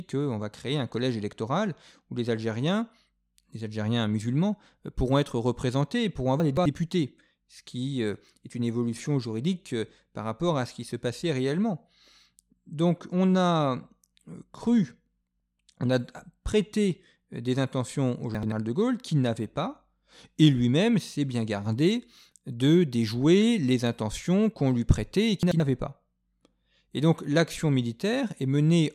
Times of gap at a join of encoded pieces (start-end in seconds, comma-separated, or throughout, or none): none